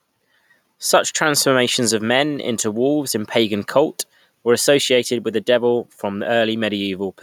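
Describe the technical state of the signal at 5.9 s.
At 5.9 s the speech signal is intact, with no technical fault audible at that moment.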